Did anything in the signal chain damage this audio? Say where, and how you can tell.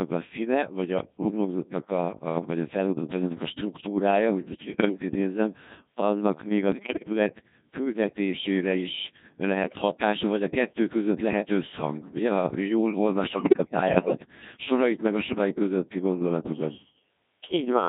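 Yes. At the codec stage, Codec 2 at 1.6 kbit/s runs throughout, making the speech heavily robotic and buzzy. A spectrogram shows rigid, synthetic harmonic stacks with no natural waveform detail.

On the radio link, bit errors on digital voice radio cause bleeps and pitch jumps at 4.74–5.02 s (after "struktúrája hogy most ugye"), 6.72–7.07 s, 9.64–9.82 s, 13.24–14.26 s and 15.28–15.38 s. Corrupted frame parameters show as abrupt, frame-sized spectral and level discontinuities.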